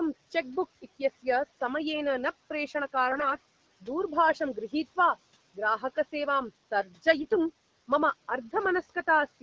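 Speech clip with AMR bit errors at 3.12 to 3.36 s and 7.16 to 7.37 s: corrupted fine-detail bits throw the codec's excitation pulses and gain values off, so pitch and level hold but the sound turns hoarse and gargly, showing on a spectrogram as smeared, noisy harmonics.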